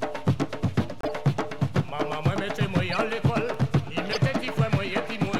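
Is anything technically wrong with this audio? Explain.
Yes. Corrupt frames decoded at 1.01–1.09 s, 2.90–2.98 s and 4.12–4.17 s: damaged compressed data played anyway, misplacing energy across a few frames, giving short chirpy noise bursts, the first loudest.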